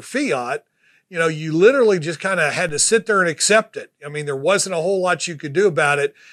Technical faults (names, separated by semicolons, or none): DC step